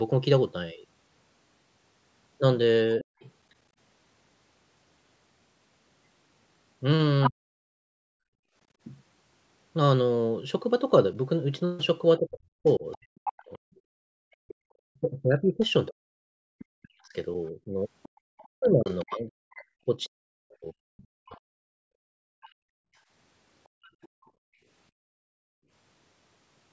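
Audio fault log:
3.01–3.1 s, 7.29–7.77 s and 12.18–22.15 s, speech suppressed in double talk: the speech level drops by around 40 dB. This is likely an echo canceller that could not separate the near talker from loudspeaker echo while both sides spoke, so it attenuated both. The longest stretch accounts for roughly 5 s of cut.
3.2–3.29 s, 7.23–7.29 s and 12.66–24.3 s, other side's voice leaking through: a second voice is audible on the microphone path. It is faint at 3.2 s, about 35 dB under the speech, and nearly as loud at 7.23 s. During the long stretch it sits about 25 dB down. Incomplete echo cancellation is the likely cause.
8.05–8.55 s, 14.57–14.61 s and 22.52–25.71 s, background gated by the echo canceller: room sound drops by about 37 dB while far-end playback is active, then returns when the canceller releases. The gaps run about half a second, a 40 ms blip, and roughly 2 s within the final range.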